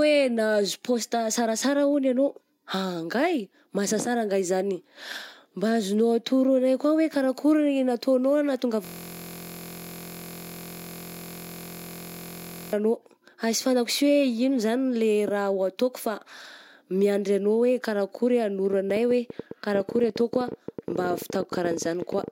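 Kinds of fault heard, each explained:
System hang loop: from 8.85 to 12.73 s one 23.22 ms slice, which fits a 1024-sample buffer, repeats exactly well over a hundred times, giving a steady 43.1 Hz buzz. The waveform shows identical repeating blocks, and the spectrogram shows evenly spaced harmonic lines.
Train of clicks: after "karakory ah", from 18.73 to 22.29 s, around fifty similar clicks tick unevenly at about 16 per second, peaking about 5 dB above the sound, likely from electrical interference. They appear as thin vertical broadband lines and sharp waveform spikes.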